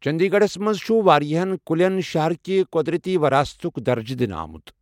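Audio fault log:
No faults found in this speech recording.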